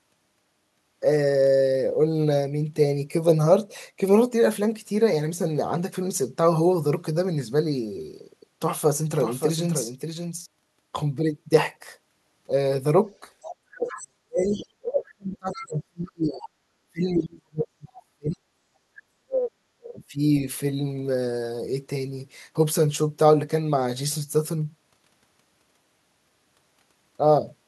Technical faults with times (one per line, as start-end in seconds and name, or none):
9.20-10.46 doubled audio track
13.21-18.45 speech suppressed in double talk
13.41-14.64 other side's voice leaking through
15.52-16.37 other side's voice leaking through
18.80-18.91 background gated by the echo canceller
19.19-20.46 speech suppressed in double talk